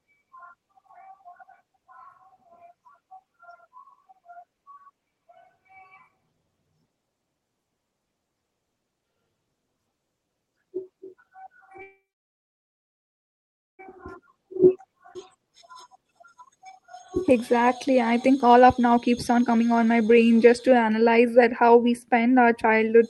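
At 11.81 s the speech stalls. A very short carried-over tail of the last sound fades almost at once, and then there are about 1.8 s of silence until 13.81 s. The talk then resumes exactly where it stopped, with nothing lost. This is a call audio freeze, likely caused by held-up packets draining the jitter buffer.

From 13.97 s to 21.26 s the speech runs noticeably hurried, about 19 percent faster, while the pitch stays unchanged. This is a jitter buffer speed-up. After the stall, the receiver had built up excess delay. It worked that delay off by trimming tiny pitch-period slices over and over, roughly one and a half seconds in total. Normal pace returns just before "that how we".

Inside that hurried stretch, between 15.14 s and 15.17 s, the audio jumps forward with only a hairline gap. Roughly half a second of speech is missing, and the two sides are butted almost directly together. This is a skip ahead: audio was discarded while later packets were already queued, which cut the delay further.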